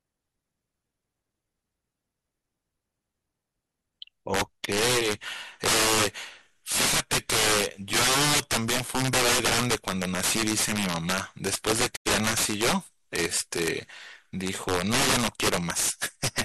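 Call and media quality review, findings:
Integer overflow, throughout: gain stage driving about 17 dB past full scale, sums wrapping to opposite sign instead of limiting. Roughly one sample in twenty flips across full range. Violent cracks on peaks, harsher than clipping.

Digital broadcast dropout, 11.95 to 12.10 s: receiver lost valid frames and muted. Audio fades out over about 20 ms, within a 0.15 s hole. Roughly 85 ms of speech is missing, consistent with two lost frames.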